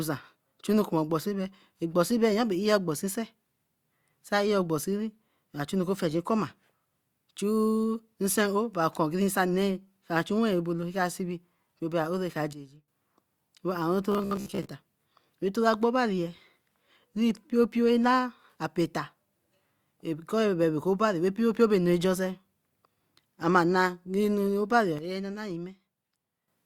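Speech recording with two kinds of fault. A digital gain change applied with no ramp is the likely cause of two sudden gain jumps: the level drops by about 12 dB from 12.53 to 12.88 s and by about 9 dB from 24.99 to 26.48 s. Voice and background noise fall together at the instant of each step. Between 14.12 and 14.69 s, audio likely arrived too seldom, and the last short buffer was replayed to fill the gaps, so about half the sound there is repeats. That produces robotic sound from repeated short buffers: a rigid, metallic buzz near 66.7 Hz, which fits a roughly 15 ms buffer looping.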